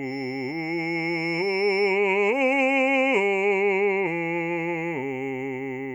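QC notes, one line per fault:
0.0 to 2.0 s, feedback whistle: a thin, steady tone at 5.3 kHz sits about 20 dB under the music and swells and fades slowly in level. Likely a speaker-to-mic loop parked right at the edge of feedback, ringing that one frequency without running away.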